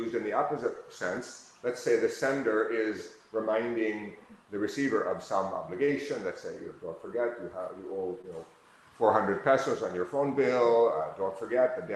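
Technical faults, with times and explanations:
5.85–5.90 s and 8.22–8.25 s, short concealed packet loss: about 20 ms of sound each time was lost in this Opus call and filled by extending the preceding sound. This is heard as a brief smear, and shows on a spectrogram as a short stretch of repeated, flattened texture.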